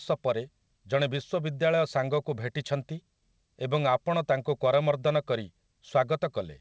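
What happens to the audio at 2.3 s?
Nothing goes wrong at 2.3 s: the speech carries straight through that moment with no dropout, glitch or distortion, only the usual band-limited sound of the G.722 call path, with nothing above 8 kHz.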